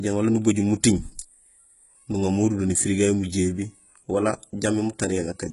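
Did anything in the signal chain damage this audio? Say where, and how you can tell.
Yes, at the codec. Throughout the speech, s sounds are gritty and metallic, with nothing above 11.1 kHz. Likely HE-AAC compression, rebuilding the treble from copied lower bands.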